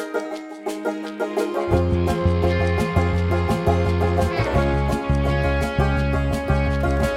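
There are no technical faults to describe at any point in this music.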